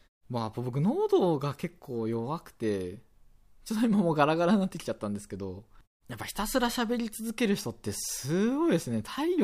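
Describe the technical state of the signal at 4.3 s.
At 4.3 s the speech signal is intact, with no fault present; any quiet there reflects the normal muting of pauses, which fades the background and lets the next sound return on time.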